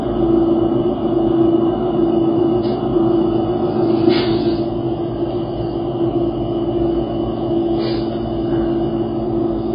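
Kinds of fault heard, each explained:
AAC compression: Nothing is heard above 5 kHz, leaving dull, heavily smeared sound. This fits a likely AAC-LC encode at roughly 16 kbps.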